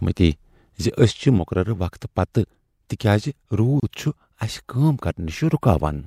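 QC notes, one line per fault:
1.38 s to end: sudden gain jump. The level drops by about 6 dB in a single step and stays down, with speech and background noise falling together. That likely comes from a gain change applied instantly, with no ramp.
3.80–3.83 s: gap at a join of encoded pieces. A 30 ms gap cuts into the running speech with smeared edges, then the speech carries on from where it stopped. That's the start delay and end padding of two separate encodes left in at the seam.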